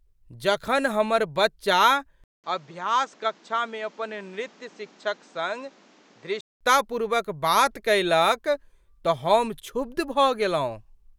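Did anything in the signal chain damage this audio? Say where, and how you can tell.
Yes. At the input stage, the capture path likely switched to a poorer device from 2.24 s to 6.61 s, right after "जखन हमर बच्चा". A silence of 0.2 s marks the changeover. The speech then loses everything above 8.2 kHz and turns duller, drops a few decibels in level, and sits on a different background noise roughly 30 dB down. At 6.61 s the fuller band returns as the original microphone comes back.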